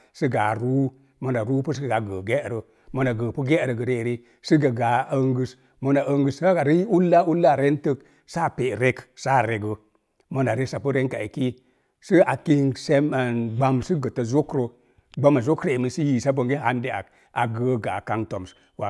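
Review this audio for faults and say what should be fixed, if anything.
No faults; nothing to fix.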